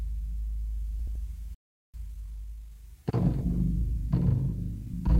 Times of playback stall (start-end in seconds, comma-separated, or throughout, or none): 1.54-1.94